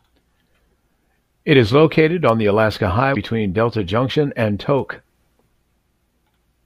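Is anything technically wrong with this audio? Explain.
Yes. Two kinds of fault are audible. At 2.29 s, just after "is located", and again at 4.79 s, there is a single sharp click. These are likely dropped samples: a handful of samples go missing, so the waveform jumps abruptly. From 3.12 to 3.17 s, damaged data in the compressed stream makes the decoder lose sync, producing a brief glitch.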